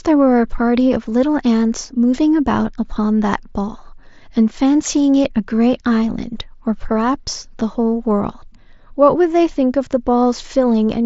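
No technical faults occur anywhere in the recording. The speech comes through a Bluetooth mSBC headset link, which limits it to about 8 kHz and adds a light graininess on louder passages, with faint upper bands now and then dropping in and out.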